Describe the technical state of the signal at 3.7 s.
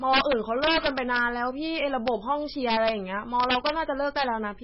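At 3.7 s you're inside an integer overflow that runs from about 3.40 to 3.81 s. Peaks push only about 2 dB past the integer limit, but instead of clipping they wrap around to the opposite sign, so each one flips across the full range and comes out as a harsh, violent crack on the loud parts.

Underneath that, the whole speech track has nothing above 5.5 kHz and a watery, swirly quality, with weak detail flickering in and out and smeared attacks. That's heavy MP3 compression damage, likely from encoding at a very low bitrate, around 16 kbps.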